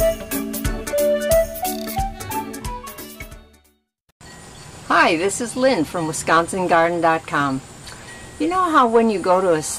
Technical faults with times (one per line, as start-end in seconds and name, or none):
none